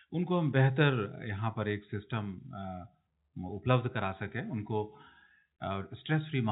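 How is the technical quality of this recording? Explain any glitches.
The technical quality is good, with no glitches to explain; the speech simply carries the narrow, sub-4 kHz band of G.711 telephone coding.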